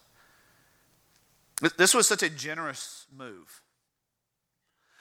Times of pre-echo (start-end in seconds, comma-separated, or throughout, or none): none